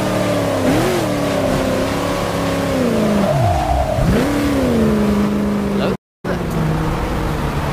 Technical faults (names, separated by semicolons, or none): playback stall; time-compressed catch-up